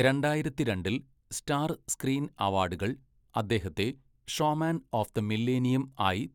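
No technical faults are audible.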